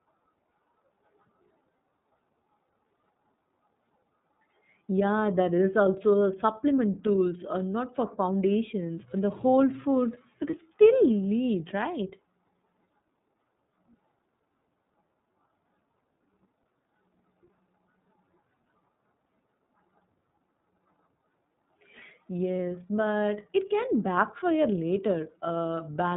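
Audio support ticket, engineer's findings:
iLBC codec throughout: band stops at 4 kHz, speech slightly rough and synthetic, plainly audible; sounds like the 30 ms frame mode at around 13.33 kbps.

Lost iLBC frames at 10.50 s and 22.56 s, about 30 ms each: brief buzzy held-vowel blip where the decoder repeats the last pitch cycle, then recovers almost instantly.

Steady thin whistle at 3.9 kHz from 22.24 s to the end, well below the speech and swelling and fading slowly. Likely a feedback whistle from a loudspeaker-to-mic loop sitting just at the edge of feedback.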